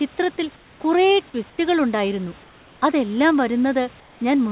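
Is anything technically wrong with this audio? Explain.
Yes. The pauses at 0.56–0.8, 1.5–1.58 (just before "ഉണ്ടായിരുന്നു അതെല്ലാം"), 2.44–2.82 and 4.0–4.2 s show comfort noise in place of the background, likely from discontinuous transmission. The real room noise gives way to smooth, featureless synthetic hiss about 2 to 3 dB quieter, set against the call's narrowband sound that stops near 4 kHz.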